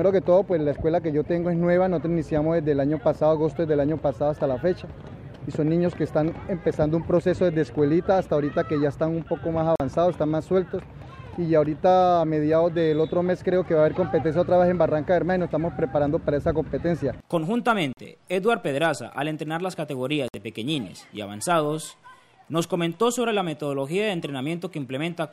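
The audio cuts out three times: at 9.76 to 9.80 s and 17.93 to 17.98 s, each gap about 44 ms, and at 20.28 to 20.34 s, about 58 ms. Each hole is brief silence, and the sound comes back further along, as if it kept playing underneath. That pattern is likely a Bluetooth dropout, where packets miss their deadline to the headphones and get thrown away. Gaps this size fit three or four lost packets.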